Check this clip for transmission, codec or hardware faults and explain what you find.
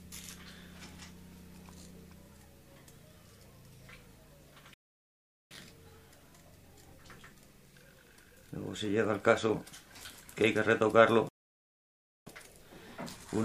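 Two playback stalls interrupt the clip, at 4.74 to 5.51 s and 11.29 to 12.27 s. Sound halts mid-flow for about 0.77 s and 0.98 s, most likely because the player starved of data. Each shows as a flat, empty gap in the waveform and spectrogram.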